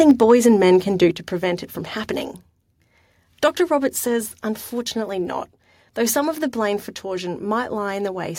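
From 0.0 to 0.32 s, just before "and men can do", the peaks sound flattened and crackly. This is microphone overload, likely from input gain set about 2 dB too high, clipping a small fraction of samples. At 0.11 s the level drops abruptly by about 3 dB, likely the microphone volume being stepped down. At 1.11 s, between "and men can do" and "to prevent it from", a second step down of about 5 dB follows, likely from the same automatic correction.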